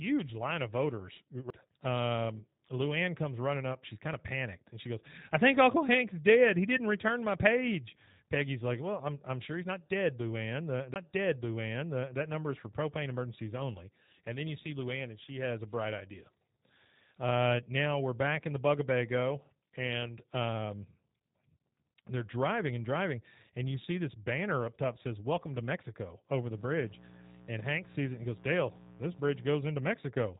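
The speech runs through the G.729 codec for the whole clip. At 8 kbit/s, this codec rebuilds each short frame from a vocal tract model, a pitch predictor and a few pulses. The damage is plainly audible. The voice sounds rough and slightly synthetic. Nothing above about 3.8 kHz survives, so sibilants lose their edge and the sound is dull and narrow.

The first CD skip comes at 1.50 s, just after "line of voters". The second comes at 10.94 s, after "I'm I'm sure he's" and before "number is for propane". Each time, the laser has jumped to another turn of the disc's spiral. Playback mutes very briefly, with a tick. It then resumes from a different point, so the flow of speech breaks abruptly.

Mains buzz starts at 26.54 s, after "over the", and lasts until 29.46 s. Sharp switching spikes from a dimmer, rectifier or poorly shielded cable have leaked into the signal twice per 60 Hz cycle. Their harmonics climb well into the kilohertz range. 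The result is a steady, raspy buzz, about 20 dB below the speech. It sits clearly under the voice.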